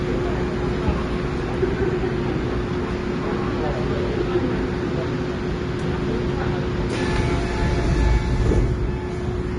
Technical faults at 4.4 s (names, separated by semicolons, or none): Vorbis compression